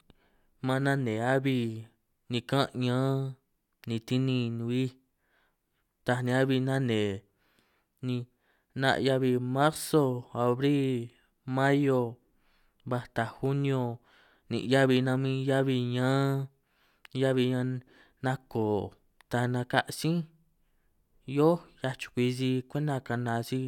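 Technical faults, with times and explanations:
No technical faults are audible anywhere in this recording.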